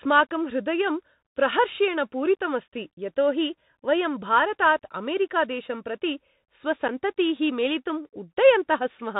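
The whole speech clip carries the Bluetooth CVSD headset codec. It encodes one bit per sample, up or down, with an adaptive step, which fits a 64 kbps CVSD link. Nothing passes above 4 kHz. S sounds turn scratchy, loud bright sounds distort, and a granular hiss sits underneath.

At 6.88 s there is unconcealed Bluetooth headset packet loss. What sounds like a single voice packet went missing, and about 7.5 ms of speech dropped out. The gap has abrupt edges. Speech returns briefly quieter afterwards.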